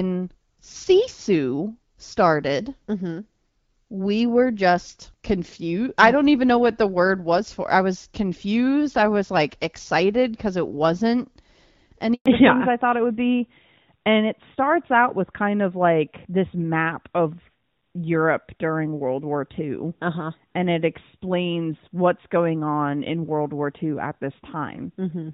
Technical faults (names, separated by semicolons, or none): handover gap; fallback to narrowband